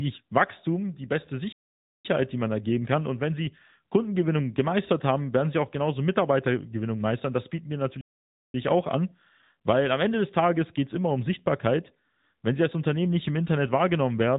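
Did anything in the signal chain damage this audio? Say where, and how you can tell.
Yes. Across the whole clip the speech sounds thin, boxy and buzzy, with nothing above 4 kHz and a synthetic edge on the voice. That is the AMR narrowband mobile codec at the codec stage. Its 8 kHz sampling removes the top end, and rebuilding speech from a vocal-tract model with a sparse pulse excitation gives the buzz. The amount of damage fits a mid-range mode of around 10.2 kbps.

There are two playback stalls, one from 1.52 to 2.05 s and another from 8.01 to 8.54 s. In each the speech stops abruptly mid-flow for about half a second, 0.52 s and 0.53 s respectively, then carries on. This points to the playback stage, with the likely cause being a player that ran out of buffered data or had its audio thread blocked, so the output went silent until the data arrived again.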